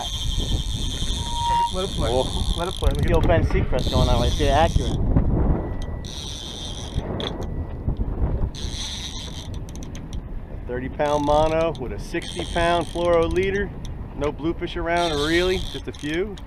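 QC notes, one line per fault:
1.17–1.76 s, loudspeaker feedback squeal: a 941 Hz tone swells in under half a second to roughly 5 dB over the programme as the mic-speaker loop runs away.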